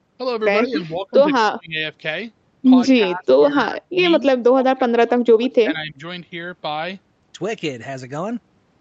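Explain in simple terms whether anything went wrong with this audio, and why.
Yes, something went wrong. The speech keeps dipping or breaking up, at 0.66 to 1.13 s, 1.4 to 1.78 s, 3.12 to 3.31 s, 3.48 to 3.95 s and 4.2 to 5.99 s. The first dip is slight. The others are much deeper, and the last one lasts well over a second. This is likely speech suppressed in double talk: both ends spoke at once, and the echo canceller mistook the talker for echo and turned the speech down.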